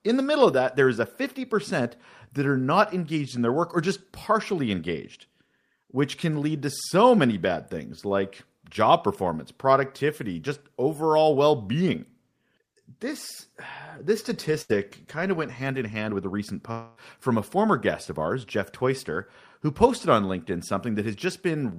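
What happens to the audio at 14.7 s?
A burst of packet loss hits from 14.61 to 14.71 s. The receiver patches the roughly 80 ms gap by extending the last speech sound and fading it, so you hear a brief held buzz or dying hiss before the audio resumes with that stretch missing.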